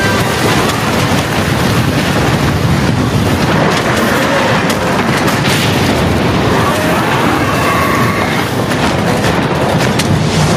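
Gain pumping runs throughout: the level swings by around 15 dB, likely from excessive input gain driving a fast limiter.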